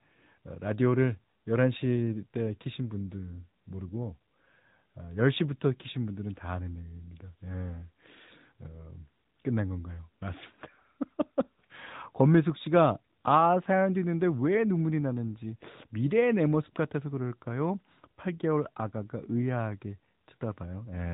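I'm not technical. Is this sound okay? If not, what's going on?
No. The speech went through an AMR narrowband mobile codec, the compression old mobile networks use, which rebuilds the voice from a simple model. Throughout, everything above about 3.8 kHz is missing, so the voice sounds muffled, phone-like, and audibly buzzy and synthetic.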